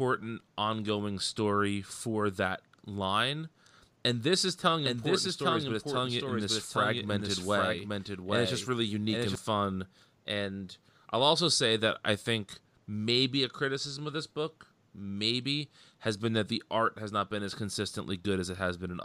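From 4.85 to 9.35 s there's a doubled audio track: a somewhat quieter copy trails about 0.7 s behind, likely a second, slower capture path, then cuts out abruptly.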